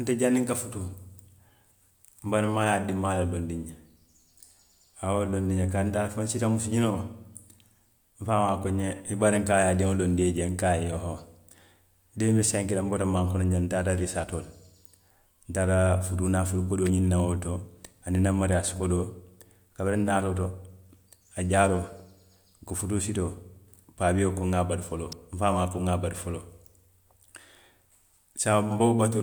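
At 16.86 s and again at 25.12 s there's a sharp little snap sitting on top of the speech, each one over in a few milliseconds. These are electrical switching spikes, most likely from a switch, motor or static discharge close to the cabling, arcing briefly and getting coupled straight into the audio line. They're not part of the recorded sound itself, just short bursts of interference laid over it, which is why they land as crisp, isolated clicks.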